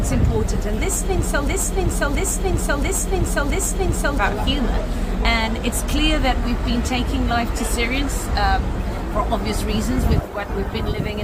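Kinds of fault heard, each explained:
Broken-record loop: a 0.68 s fragment repeats exactly four times, back to back, from 1.48 to 4.18 s, likely from a stalled player or stream; the intended audio is lost.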